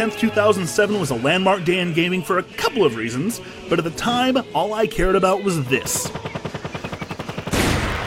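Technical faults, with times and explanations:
6.79–8.06 s: block size mismatch (truncated). From 6.79 s to the end, a steady buzz at 100 Hz sits on the sound, and the audio runs about 1.09 times faster while keeping roughly its normal pitch. One stage is delivering blocks longer than the following stage accepts, so the tail of each block, roughly 8 percent of it, is discarded. Each cut leaves a discontinuity at the 100 Hz block rate, which produces the buzz. The missing material shortens playback, so timing is compressed without transposition.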